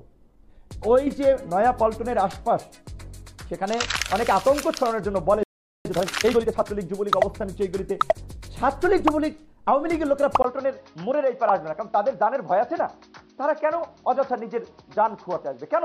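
At 5.43 s the output goes silent for about 0.42 s, until 5.85 s. This is a playback stall, most likely the player running short of buffered data or its audio thread being held up, so nothing reached the output until it recovered. The sound cuts off in mid-flow, leaving a clear hole before it resumes.

From 5.85 s to 6.67 s the player works off the backlog the stall left behind. This time-compressed catch-up runs the audio at 1.5 times its normal speed by dropping small slices and cross-fading across the joins, rather than by resampling. The pitch therefore stays where it was, but the passage sounds hurried.

At 10.42 s the input appears to have been switched to a poorer device, likely a different microphone or a headset in its call mode, and the change holds to the end of the clip. A silence of about 20 ms marks the switch. After it, the band is narrower, so the sound turns duller and boxier while its loudness stays roughly the same. 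A new background noise floor also appears, sitting around 45 dB below the signal.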